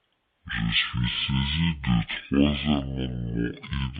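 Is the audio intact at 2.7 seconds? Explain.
No. At 2.7 s the speech is affected by stereo read as mono, which runs through the whole clip. The interleaved left and right samples have been taken as one continuous channel, so each stereo frame becomes two consecutive mono samples. That doubles the sample count for the same material, and playback runs at 0.5x speed with the pitch dropped 12 semitones, a full octave. A fainter mirrored copy of the sound also sits in the upper half of the spectrum.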